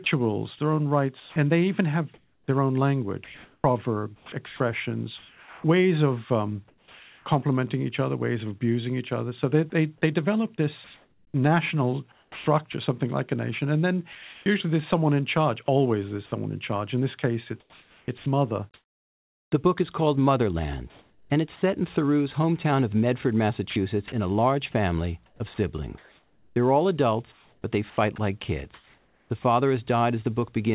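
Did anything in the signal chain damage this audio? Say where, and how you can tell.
Yes. At the call-processing stage, the sender's voice detector likely gated the signal on and off, chopping the sound from 0.04 to 7.26 s, 9.7 to 12.74 s, 14.12 to 19.52 s and 23.7 to 29.44 s.

From 20.9 to 21.62 s, the detector likely halted transmission, and comfort noise replaced the background. The real ambience turns into steady, featureless synthetic hiss.

Within that pause, at 21.56 s, the detector likely dropped 60 ms of sound it took for background. Comfort noise briefly takes its place before the signal resumes.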